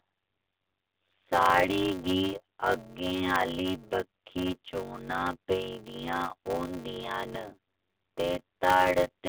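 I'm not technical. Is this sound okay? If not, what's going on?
No. A block size mismatch (padded) runs from start to finish. One part of the audio chain hands over chunks of sound that are too short for the next part, which fills each gap with silence. Those tiny silences repeat about 94 times a second, which you hear as a steady buzz, and the speech drags at roughly 0.63 times normal speed while the character of the voice stays the same. This fits a 512-sample buffer. The phone-line sound, with nothing above 3.7 kHz, is expected here.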